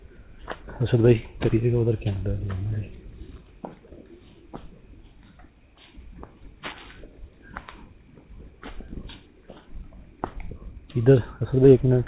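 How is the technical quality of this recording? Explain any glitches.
The recording has no glitches, and the traces of the call path are its usual coding noise and its narrowband sound, with nothing above 4 kHz, which fits a G.711 mu-law link.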